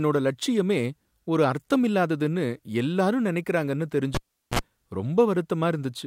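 At 4.15 s the cable is pulled and plugged in. A pop cuts the speech to near silence for about 400 ms. A 51 ms burst of 60 Hz mains buzz follows, then a pop at 4.59 s.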